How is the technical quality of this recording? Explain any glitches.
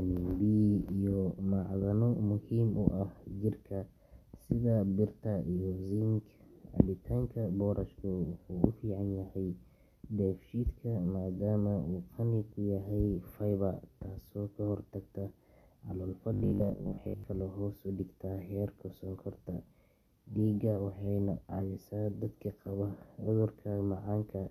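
One glitch stands out, from 16.34 to 17.24 s, where the speech turns into robotic sound from repeated short buffers. For close to a second the voice becomes a stiff, metallic buzz locked at 50 Hz, still loosely tracking the words. The likely cause is audio arriving too slowly, so the software keeps replaying the last chunk, about 20 ms judging by that buzz, and skips most of the real audio in that stretch.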